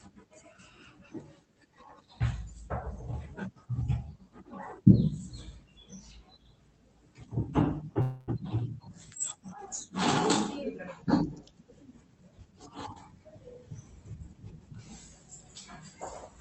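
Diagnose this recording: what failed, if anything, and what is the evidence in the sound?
Call audio freeze, 8.01 to 8.30 s: the sound stretches into a fading buzz for 263 ms and then resumes intact, likely a network stall that emptied the jitter buffer.

Drift correction step, 10.63 to 11.54 s: speed drops 5.5% and pitch falls about 98 cents, nearly a semitone, likely a clock-matching rate jump in the playback buffer.

Jitter buffer speed-up, 12.09 to 13.63 s: speech runs at 117% speed without a pitch change, as the buffer trims pitch-period slices totalling about 300 ms to shed excess delay.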